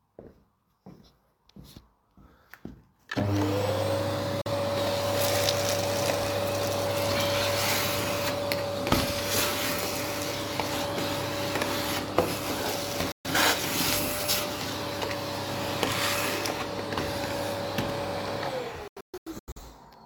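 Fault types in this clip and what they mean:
digital broadcast dropout: the receiver stopped getting usable frames and muted until clean ones returned, so the sound fades out over about 3 ms and picks up later with the missing audio gone. Holes occur at 4.41–4.50 s and 13.12–13.30 s, then several short gaps scattered across 18.88–19.62 s, about 0.43 s lost in all, the longest 128 ms. A waveform shows flat silent gaps; a spectrogram shows full-height blank vertical bands.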